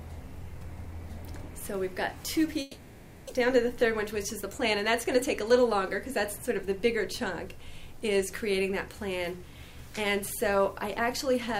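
From 2.61 to 3.31 s the sound gives way to a buzzy continuation of what came just before, fading over the stretch without ever dropping to true silence. When the audio returns, about 600 ms of it is simply gone. This is likely a long network dropout: packets stopped arriving, the receiver spent roughly 680 ms synthesising a fill from the last good audio, and playback resumed with the delay shifted by around 70 ms.

From 3.89 to 5.42 s the audio runs slightly fast, about 4 percent quicker than normal, with the pitch unchanged. This is a jitter buffer speed-up. The receiver was holding more audio than its target, so it shortened playback by cutting out many tiny pieces, each one or a few pitch periods long. In total it trimmed away roughly 70 ms to bring the delay back down.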